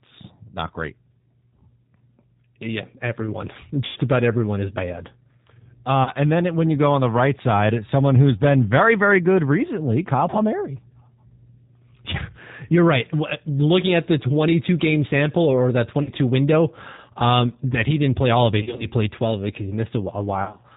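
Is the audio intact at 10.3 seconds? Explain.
No. From 10.30 to 10.36 s there is VoIP packet loss concealed by the speech codec. The decoder lost about 30 ms of data, which fits three 10 ms frames. It stretched its last pitch and filter with falling gain. The result is a brief buzzy tone or coloured noise that fades, where speech should continue.

The G.729 codec also shapes this moment, as it does throughout. At 8 kbit/s it rebuilds speech from a vocal tract filter, a pitch predictor and sparse pulses. Nothing above 4 kHz survives, and the speech sounds plainly rough and synthetic.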